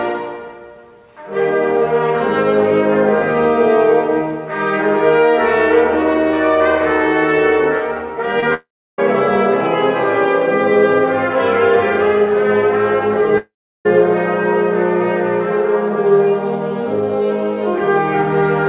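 Short concealed packet loss at 8.40 to 8.44 s: about 20 ms of audio failed to arrive in time, so the receiver extended the preceding sound, from its pitch if voiced or as shaped noise otherwise, and then blended back, leaving a brief smear. The long network dropouts span 8.54 to 9.00 s and 13.38 to 13.87 s. Each is likely a stretch where no packets arrived, losing about 440 ms and 480 ms respectively. In both, the continued sound fades out, leaving about 320 ms and 350 ms of silence before the audio resumes further on without the missing part. Throughout, the audio has nothing above 4 kHz, which fits a WebRTC call path using G.711 A-law at 64 kbps.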